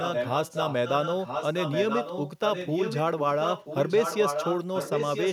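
Speech, with an echo leak: a delayed copy of the voice returns about 0.98 s late from 0.0 to 3.01 s and from 3.4 s to the end, only a few dB below the direct speech, plus a weaker scrap at 3.18–3.24 s. The likely cause is a loudspeaker-side echo canceller letting its microphone pickup back into the call. Unlike room reverberation, which trails smoothly off each sound, this is a distinct, fixed-delay repeat.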